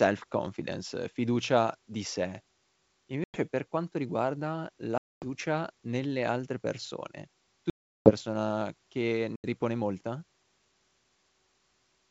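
Packet loss on an ADPCM call cuts four hard-edged silent holes into the speech: about 100 ms at 3.24 s before "per quanto riguarda", 240 ms at 4.98 s before "nelle altre persone", 360 ms at 7.70 s, and 80 ms at 9.36 s. After each gap the G.722 decoder's predictor and step size no longer match the sender's. The returning speech comes back with brief distortion, then settles within tens of milliseconds.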